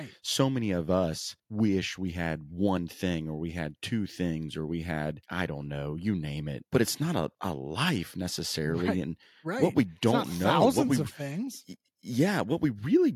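No technical faults can be heard in this recording.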